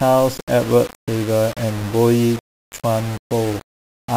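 From start to finish the speech carries a grainy, rasping distortion that follows its loudness and collapses into sputtering or silence on the quietest parts. The likely cause is low bit depth without dither, consistent with rounding to about 5 bits, leaving error only around 15 dB below the signal. Unlike steady hiss, it disappears in pauses.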